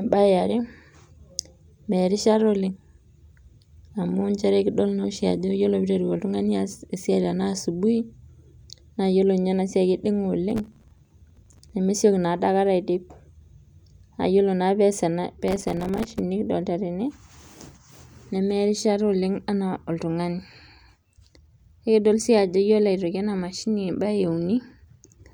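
Processor overload crackle appears twice in the speech: from 10.50 to 11.69 s, just after "siai keidinga", and from 15.48 to 16.21 s, ending before "nikidolita tena". Dozens of buffers of a few milliseconds each missed their deadlines and were dropped to silence, producing a gritty tearing. The waveform shows rapid dropouts to silence, and the spectrogram shows vertical broadband stripes.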